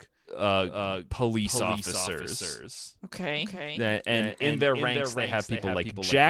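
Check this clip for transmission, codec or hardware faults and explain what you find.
One fault runs through the whole clip: a doubled audio track. A second copy of the speech trails the first by roughly 0.3 s, at about 5 dB lower. A slower second capture path is the likely cause. The echo is full-band and dry, with no room tail, so every syllable gets a distinct, flat repeat. The Opus coding itself adds only light damage.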